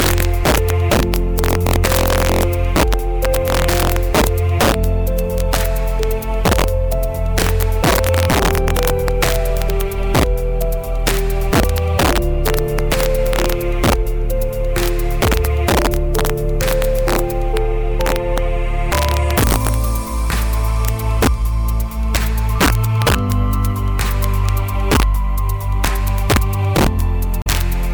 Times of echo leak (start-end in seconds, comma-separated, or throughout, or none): none